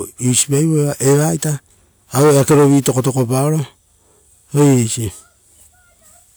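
No technical faults occur at any point in the audio, so there is nothing to describe in time order.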